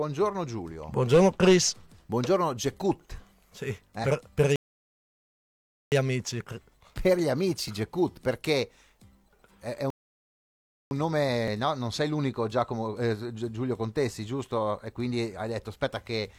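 At 1.65 s, 4.04 s, 7.68 s and 11.48 s the likely cause is a dropped buffer (overrun): samples were overwritten before being read, so roughly 10, 30, 10 and 20 ms vanish and the sound jumps ahead. Between them, at 4.56–5.92 s and 9.90–10.91 s, rebuffering stalls occur as playback runs out of downloaded data, cutting to silence for 1.36 s and about 1.0 s before resuming exactly where it stopped, with nothing lost.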